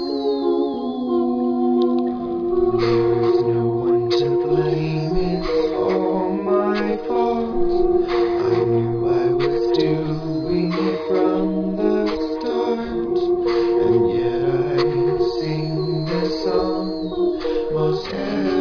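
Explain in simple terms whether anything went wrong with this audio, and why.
Nothing went wrong with this audio that a careful listen can pick out. No moment in it stands out as a problem, so there is nothing to explain.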